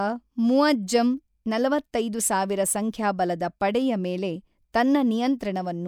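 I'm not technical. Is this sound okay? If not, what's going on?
Yes, this speech recording is okay from a technical point of view. There's nothing going wrong in it that needs explaining or fixing.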